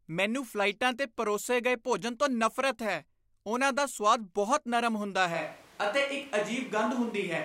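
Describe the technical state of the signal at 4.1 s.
At 4.1 s the speech signal is intact, with no dropout, clipping, glitch or other technical fault.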